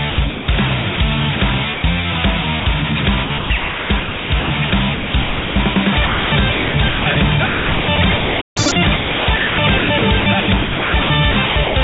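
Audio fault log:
0.1–0.48 s, 3.24–5.76 s, 6.06–7.16 s, 7.46–11.76 s: sound chopped by the voice detector. Within each stretch the sound repeatedly cuts out and is replaced by synthetic comfort noise, about 0.26 s, 1.48 s, 0.68 s and 2.36 s in total. This is likely the sender's detector toggling transmission on quiet passages.
0.96 s, 1.74–1.84 s, 2.6–2.66 s: sound dropped by the voice detector. Short pieces of sound, 20 ms, 100 ms and 60 ms long, give way to steady comfort noise and then return. This is likely the sender judging low-level sound as background and briefly stopping transmission.
8.41–8.57 s: playback stall. Output goes silent for about 150 ms in mid-flow, then resumes. This is likely the player running dry or its thread being blocked, leaving nothing to render until data arrives again.
8.57–8.72 s: catch-up at higher speed. For roughly 0.15 s the sound plays at 2× speed with pitch raised by about ten semitones, then snaps back to normal. 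The player is resampling its backlog to recover the time lost in the stall.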